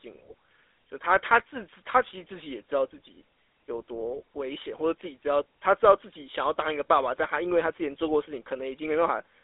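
Speech, and it's been through the GSM full-rate codec the whole way through: narrow phone band, roughly 300 Hz to 3.6 kHz, with that buzzy, gravelly roughness from pulse-driven excitation, consistent with the old 13 kbps coder. The damage is plainly audible.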